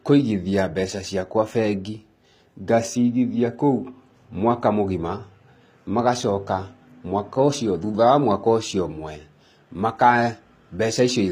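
The treble is likely being regenerated by HE-AAC compression at a low bitrate, around 24 kbps, rather than carried directly. Throughout the speech, the upper band sounds synthetic, with gritty, metallic s sounds, plainly audible codec damage, and nothing above 15.4 kHz.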